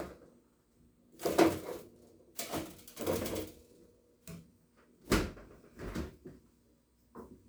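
No technical faults can be heard anywhere in the clip.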